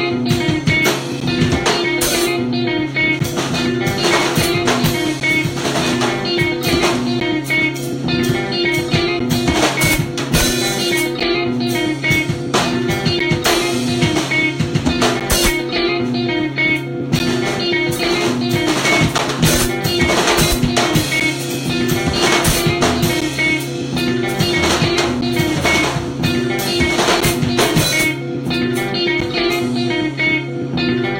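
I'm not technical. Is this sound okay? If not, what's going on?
No. You can hear periodic USB or driver dropouts. From about 1.20 s to 29.2 s, the sound briefly cuts out every 2.0 seconds, about fifteen times in all. Each gap is roughly a hundredth of a second of silence, so it comes across as a small, regular tick or pop. The steady timing gives it away. Some background task on the computer keeps interrupting the USB connection or audio driver, and a sliver of sound is lost each time.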